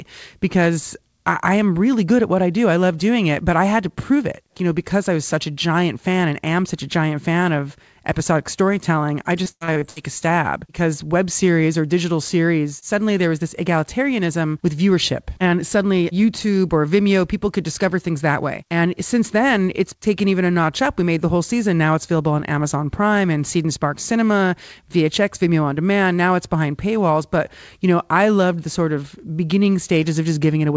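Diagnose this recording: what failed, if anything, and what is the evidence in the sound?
Network stage: repeated packet loss (robotic sound) from 9.44 to 10.23 s, between "of episodic storytelling I" and "because web series or". Across that span the speech turns choppy, with several short holes, the longest about 90 ms. Roughly a third of the stretch is concealment: the receiver fills each missing packet by extending the last received sound, and the next loss arrives before the signal recovers. The speech is band-limited at 8 kHz, consistent with a wideband call codec.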